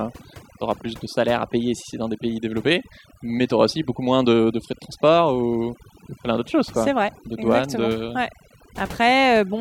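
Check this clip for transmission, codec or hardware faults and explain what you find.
One fault runs through the whole speech clip: overdone noise removal. A noise reducer was set too aggressively. It cuts any frequency band close to its noise estimate, taking soft parts of the voice too. Background drops and breaks up into twinkling specks.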